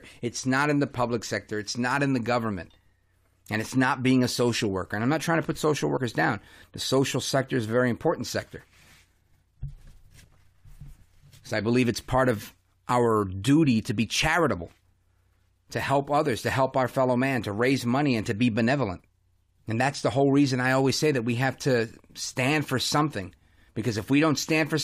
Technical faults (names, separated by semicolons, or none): compressed frames skipped